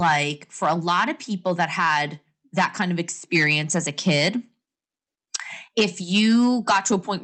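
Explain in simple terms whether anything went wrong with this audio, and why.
Hard clipping runs through the whole recording. The speech was driven louder than the system could carry, so its loudest peaks were chopped flat, adding a harsh crackle on emphatic sounds.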